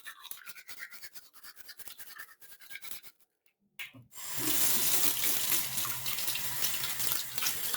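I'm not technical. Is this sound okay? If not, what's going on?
No. Three things are wrong with this sound.

A noise suppressor meant for speech was left switched on for this general sound throughout. It mistakes steady tones, room ambience and echo for background noise and keeps turning them down, then back up. Sharp starts of sounds slip through, but anything held or fading gets pushed down, so the level keeps pumping and fluttering by a clearly noticeable amount, and the sound feels thinner than it should.

Between 0.95 and 3.76 s the problem gets worse. Here the sound is cut by the noise suppressor: it decided this stretch was mostly noise and pulled it down much harder than the rest, for about two seconds in total. Sustained and fading parts sink sharply in loudness and their tails are chopped short, while sudden hits come through more intact.

There is also sample clock jitter across the whole clip. 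The clock that times the recording wobbles by a few millionths of a second, so each moment is captured slightly too early or too late. That timing error turns into a fairly strong hiss or grittiness riding on the sound itself. It grows louder on loud and bright passages and disappears whenever the sound goes quiet.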